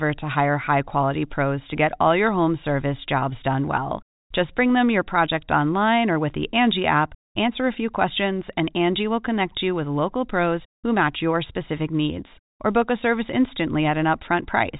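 Speech clip with nothing technically wrong to report.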